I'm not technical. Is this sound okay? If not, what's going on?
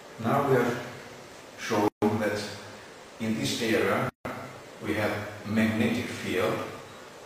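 No. There are two brief silences: one from 1.88 to 2.02 s, about 140 ms, and one from 4.09 to 4.25 s, about 160 ms. Each is a gap at a join of encoded pieces. The audio was saved in separate parts and stitched together, and each part kept a bit of built-in silence.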